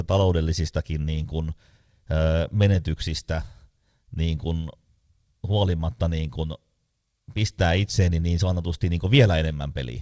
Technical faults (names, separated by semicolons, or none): none